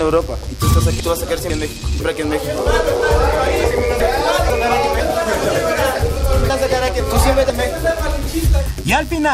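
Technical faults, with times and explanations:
Throughout, mains buzz: a switching spike from a dimmer, rectifier or unshielded lead gets into the signal path twice per 50 Hz mains cycle. The resulting harmonics climb into the kilohertz range, giving a steady, raspy buzz sitting about 25 dB below the sound.
1.0–2.0 s, 4.0–5.0 s and 6.5–7.5 s, chunks out of order: in each span a half-second chunk was delivered or written one chunk late, so it plays after the chunk meant to follow it. Nothing is missing, but the audio jumbles briefly, with three hard joins, at the start, middle and end of each span.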